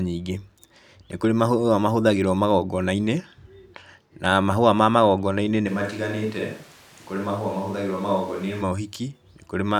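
From 5.69 s to 8.61 s the speech abruptly turns roomy and hollow, loses its low end, drops by around 5 dB and sits over background noise only about 25 dB below it, then snaps back just as suddenly. This is a switch to a distant microphone. The close microphone's feed most likely dropped out, so a mic farther away, such as a camera's, picked up the speech along with the room.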